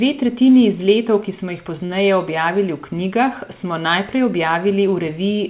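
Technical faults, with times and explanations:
1.86–1.91 s: short stall from a late packet. A packet arrived late, the jitter buffer emptied, and the receiver held the last sound for 34 ms until it arrived, then resumed where it stopped. Unlike a dropout, the speech is stretched rather than cut, with a slight buzz or dip.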